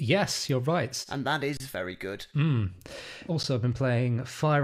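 Speech with two brief silences, at 1.57 to 1.60 s just before "very good" and at 3.43 s: an underrun with held sample, the output freezing on its last value, then resuming softly where it stopped.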